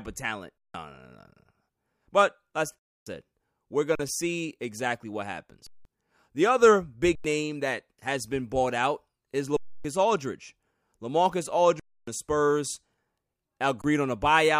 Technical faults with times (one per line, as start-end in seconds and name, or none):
0.58-0.74 underrun with held sample
2.79-3.06 underrun with held sample
3.95-3.99 underrun with held sample
5.67-5.85 underrun with held sample
7.15-7.24 underrun with held sample
9.57-9.85 underrun with held sample
11.80-12.07 underrun with held sample
13.82-13.84 underrun with held sample